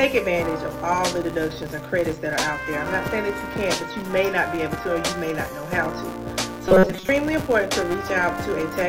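Filter restarted on every block, throughout: each block starts from a cleared filter state, adding a small transient that builds a level-following 172 Hz buzz, consistent with 256-sample blocks.

Robotic sound from repeated short buffers, 6.68 to 7.09 s: the sound turns rigid and metallic with a fixed 188 Hz buzz, likely caused by a 5.3 ms stretch repeating while most real audio is skipped.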